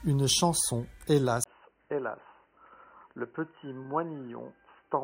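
At 1.44 s there is a 20 ms gap, after which the speech runs to the end band-limited at 3 kHz, a few decibels quieter and over a faint new noise floor, sounding dull and boxy. This is likely an input switched to a poorer device.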